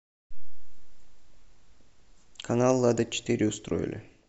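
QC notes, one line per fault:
No fault is audible anywhere in the speech. Nothing in the clip calls for a QC entry.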